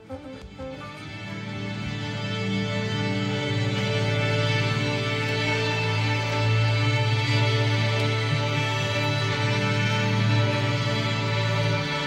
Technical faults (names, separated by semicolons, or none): none